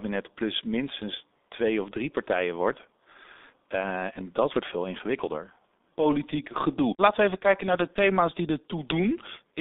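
From start to finish the speech passes through the G.723.1 codec, an early internet-telephony coder that rebuilds the voice from a coarse model refreshed only every 30 ms, which fits a bitrate of about 6 kbit/s. The line passes only 250 Hz to 3.6 kHz, so the speech loses its low body and its upper brightness. The damage is heavy: the voice sounds muffled and hoarse, and consonants smear into one another.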